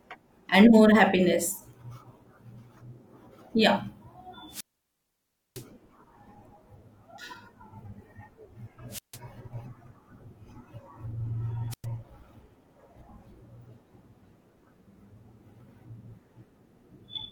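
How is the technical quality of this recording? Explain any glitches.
The speech is broken three times by wireless microphone squelch dropout: a long gap from 4.48 to 5.66 s, about 0.96 s silent, then shorter ones at 8.89 to 9.19 s (0.15 s mute) and 11.70 to 11.85 s (0.10 s). Each time, hiss rises and the sound cuts to near silence. The analogue radio link fades until the receiver's squelch mutes its output.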